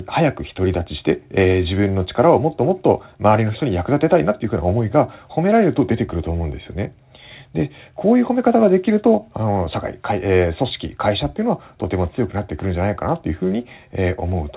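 No faults found in the speech; the call link's band stops at 4 kHz, which fits a G.711 mu-law codec at 64 kbps.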